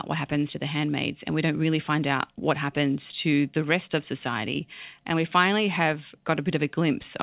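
No technical faults can be heard in the speech. It came over a WebRTC call path that is working normally, with nothing above 4 kHz, which fits a G.711 mu-law codec.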